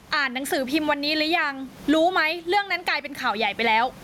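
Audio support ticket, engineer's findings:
Gain pumping, whole speech clip. Roughly 15 dB gain swing. Likely gain too high, fast limiter.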